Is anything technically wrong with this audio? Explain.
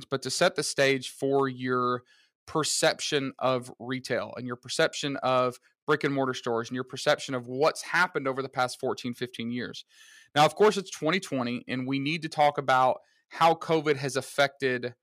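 No, nothing technically wrong stood out on listening to this speech recording.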